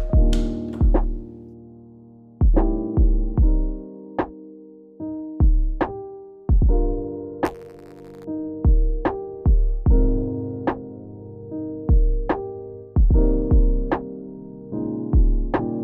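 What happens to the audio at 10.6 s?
Nothing goes wrong at 10.6 s; the audio plays through that moment intact, with no dropout, click or distortion.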